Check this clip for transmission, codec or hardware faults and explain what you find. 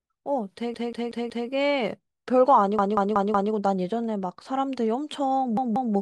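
The speech has a repeated-buffer fault at three points: 0.74–1.49 s and 2.79–3.53 s, where one 186 ms slice (fitting an 8192-sample buffer) plays four extra times, and 5.57–5.94 s, with two extra plays. Late data makes the device replay its last block, producing a stuttering loop with hard joins. Unlike a dropout, nothing goes silent and the speech resumes exactly where it stopped.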